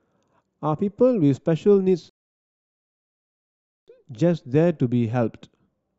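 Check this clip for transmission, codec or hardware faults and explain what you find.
One transmission fault is present: a rebuffering stall from 2.09 s to 3.88 s. The player exhausted its store of downloaded audio and had to halt playback until more data arrived over the connection. The speech drops abruptly into silence for about 1.78 s, then picks up at exactly the point where it broke off, with nothing skipped or repeated. The clip is therefore longer by that gap rather than missing any content.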